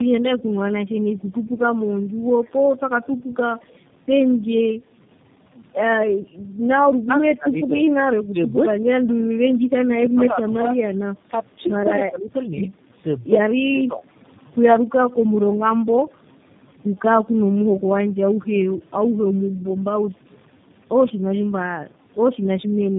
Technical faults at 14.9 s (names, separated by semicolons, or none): tandem speech coding